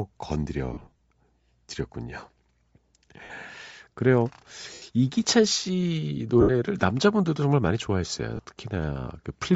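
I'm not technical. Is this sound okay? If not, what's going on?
No, not quite. The whole clip has a plainly audible breathy, grainy edge on the speech, with the crisp top end replaced by hiss. That's likely Bluetooth LC3 compression, the squeeze Bluetooth LE Audio applies, which throws away upper detail and fills the gap with noise.

There are also lost LE Audio frames: brief moments where chunks of sound never arrived and the receiver guessed, giving a short noisy smear. The worst is around 0.73 to 0.99 s, a cluster of small dropouts, the longest about 40 ms. Shorter ones land at 3.24 to 3.30 s, 4.74 to 4.82 s, 6.41 to 6.51 s and 8.36 to 8.39 s.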